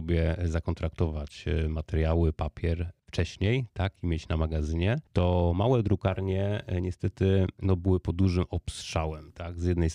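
Nothing goes wrong anywhere in this speech recording; there's simply no technical fault to point to from beginning to end.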